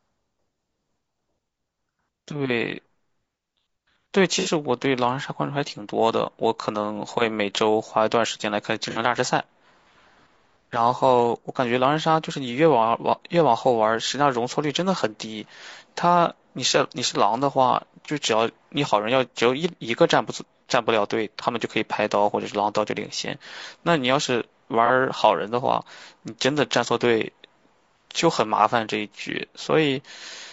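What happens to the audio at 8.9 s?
A brief smeared, noisy patch interrupts the sound from 8.90 to 8.99 s. This is AAC frame loss with concealment. The decoder lost a couple of frames, roughly 60 ms of audio, and filled the gap by reworking the last good spectrum, leaving a blurred, phasey texture.

Around that patch and throughout, the speech is rough and grainy, with noise between the harmonics and a thin, synthetic top band. The likely cause is low-delay AAC compression at about 32 kbps, whose short frames resolve pitch harmonics poorly.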